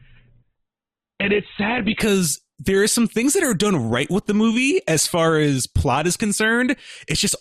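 From 0.0 to 2.0 s the adaptive stream starts at a low bitrate: nothing is present above 4.2 kHz and codec artefacts are stronger, which fits a very low Opus rate near 8 kbit/s. At 2.0 s, just before "there are some things", quality steps up abruptly without a gap.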